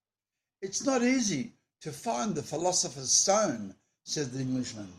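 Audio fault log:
No fault is heard anywhere in the speech. Nothing in the recording calls for an entry in the log.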